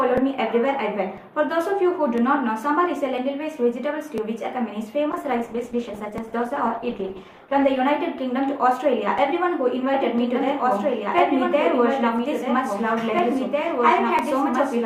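From 5.12 s to 7.87 s the call's bandwidth estimate collapses and the encoder is pushed from 64 kbps down to 14 kbps, holding that floor for about 2.7 s. This call bitrate drop forces much coarser coding and strips away the upper frequencies, so the sound turns muffled and rough, with a watery smear over its texture, before the rate climbs back and brightness returns.

At 9.94 s a second copy of the audio is mixed in and stays to the end, most likely because the same signal is being captured again by a slower path. This doubled audio track trails the original by roughly two seconds at around 5 dB lower. It carries full bandwidth with no decay or room colour, enters abruptly, and lays a distinct, clean repeat under everything that follows.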